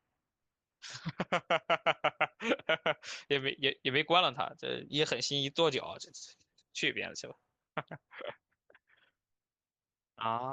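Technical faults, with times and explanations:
Nothing to flag: no technical faults heard anywhere in the speech.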